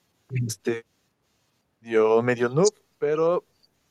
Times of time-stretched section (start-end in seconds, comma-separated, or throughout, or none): none